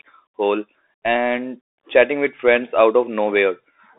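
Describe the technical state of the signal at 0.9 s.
At 0.9 s the speech is going through a Bluetooth CVSD headset codec, as it is for the whole clip. It's squeezed into roughly 300 Hz to 3.6 kHz with nothing above 3.8 kHz, and the one-bit adaptive delta coding leaves scratchy sibilants and a grainy hiss underneath.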